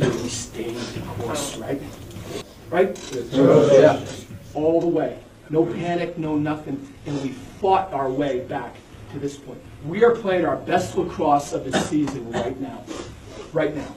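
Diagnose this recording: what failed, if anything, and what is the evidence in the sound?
Network stage: an adaptive stream at a lower bitrate kicks in at 4.54 s and stays, switching abruptly without a gap. Artefacts thicken and nothing above 12.3 kHz survives, pointing to a low-bitrate HE-AAC fallback.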